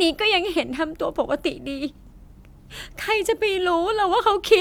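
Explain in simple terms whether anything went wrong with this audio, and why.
Nothing went wrong here; the speech comes across steady and whole, with nothing cutting in or dropping out along the way.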